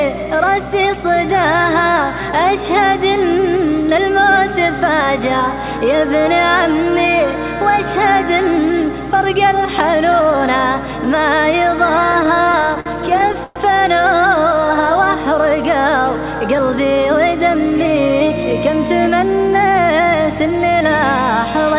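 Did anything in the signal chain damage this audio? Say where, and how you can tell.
Yes. Repeated stalls (stutter) at 12.12 to 13.58 s show up at the network and jitter buffer stage: 16 gaps, the longest 112 ms, which the receiver bridged by stretching and fading the last sound, about 314 ms in total. Nothing is lost, but the audio drags and stutters.

A jitter buffer slow-down at 14.36 to 14.94 s follows as the buffer rebuilds its reserve. It repeats single pitch periods, so the sound runs at 93% speed at unchanged pitch and gains 44 ms, with drawn-out sounds.

A jitter buffer speed-up at 17.14 to 17.87 s comes from the same buffer holding too much audio. It trims short pitch-period slices, about 40 ms in all, giving 105% speed at the same pitch, which sounds slightly hurried. Through all of this the call path cuts everything above 4 kHz, which fits G.711 A-law at 64 kbps.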